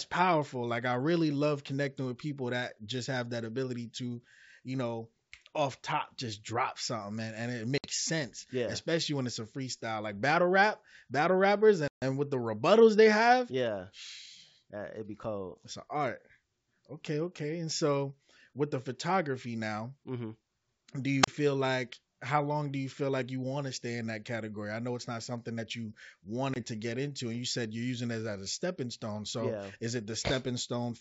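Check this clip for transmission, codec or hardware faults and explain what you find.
Two faults are present in this speech, carried over wideband G.722 coding whose faint upper-band hiss fits its 64 kbit/s mode.

Packet loss on an ADPCM call occurs at 7.78–7.87 s (60 ms lost), at 11.88–12.03 s (140 ms, between "battle rap battle rappers" and "with the rebuttals they") and at 26.54–26.62 s (20 ms, before "to get into and"). Each is a hard-edged silent hole. Because the decoder's adaptive predictor and step size lose track of the sender's, the speech comes back slightly distorted before settling.

A wireless microphone squelch dropout occurs at 21.22–21.28 s, just before "feel like how long". The FM radio link fades until the receiver's squelch mutes for about 35 ms. You hear a brief rise of hiss, then near silence, then the voice returns.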